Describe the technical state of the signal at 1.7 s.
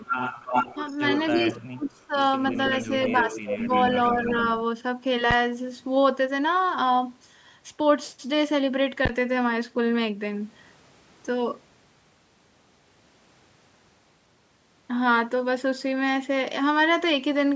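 At 1.7 s the signal sits inside a stretch of speech suppressed in double talk, running from about 1.34 s to 2.17 s. Both ends appear to be talking at once, and the echo canceller, likely unable to tell the local talker from the loudspeaker echo, pulls everything down. The speech dips sharply, by as much as about 35 dB, and breaks up in pieces totalling around 0.7 s. On a waveform the envelope collapses into near-flat gaps. On a spectrogram the energy drops out in vertical bands.

Just before this moment, from 0.03 s to 1.63 s, there is an echo leak. A copy of the speech arrives about 301 ms late and only a few dB below the direct sound, which gives a doubled, smeared quality. Incomplete echo cancellation at the loudspeaker end is the likely source. A spectrogram shows each harmonic pattern repeated about 0.3 s later, and the waveform shows overlapping bursts. Across the whole span the spectrum stops at 8 kHz, which is ordinary call processing.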